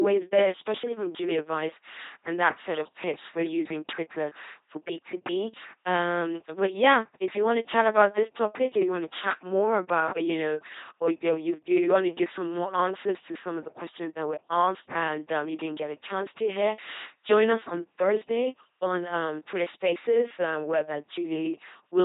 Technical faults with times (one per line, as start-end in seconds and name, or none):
0.00-22.05 LPC-10 vocoder